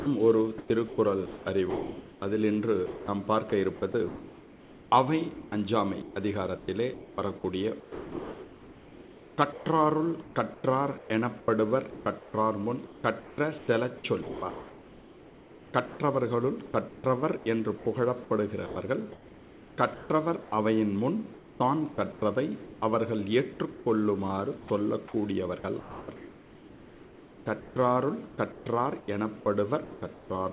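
From 0.00 to 3.94 s the sound is chopped by the voice detector, likely because the sender's detector kept toggling transmission. About 1.3 s in total is swapped for synthetic comfort noise, so the audio stutters. The same choppy pattern returns from 5.34 to 16.0 s, with about 5.2 s replaced, and again from 16.88 to 17.86 s, with 0.32 s replaced. Through all of it the band stops at 4 kHz, which fits a G.711 call path.

At 18.66 s a 0.1 s piece of sound is dropped by the voice detector, which likely judged it to be background and stopped sending, leaving steady noise in its place. From 18.66 to 20.52 s comfort noise stands in for the background, likely from discontinuous transmission during the pause. The receiver fills about 1 s with smooth, featureless noise instead of the real ambience, which loses its texture until the sound resumes.

From 21.34 to 30.3 s the sound is again chopped by the voice detector, likely the same switching between sending and not sending. 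About 3.4 s is replaced with comfort noise, giving the same choppy sound.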